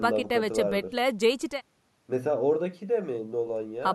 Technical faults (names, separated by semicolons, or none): none